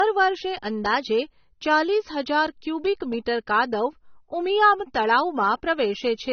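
Speech that sounds dull and band-limited throughout, with nothing above about 6.3 kHz and the artefacts of an earlier encoding still present. It is likely low-bitrate audio saved at a high bitrate: a heavily compressed earlier encoding, probably around 24 kbit/s AAC, re-saved as high-bitrate MP3 that cannot restore what was lost.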